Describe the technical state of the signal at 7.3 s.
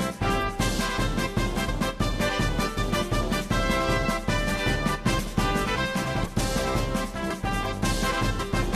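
At 7.29 s the audio has compressed frames skipped: a run of coded frames never reached the output, either missing or rejected by the decoder as damaged, so playback jumps forward by about a tenth of a second. Unlike a dropout, no silence is inserted; the sound simply resumes later than it should.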